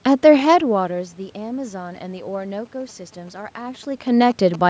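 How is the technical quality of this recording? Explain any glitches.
The recording has one technical fault: interference from a nearby mobile phone.

GSM signalling bursts run from 1.95 s to 4.56 s. A 2G handset close to the equipment was exchanging brief control transmissions with its network, not carrying a call. The audio circuitry rectified that radio energy into the signal path, making the bursts, which repeat at about 217 Hz, audible. They come through as a galloping dit-dit-dit of short buzzes, sitting roughly 20 dB below the speech.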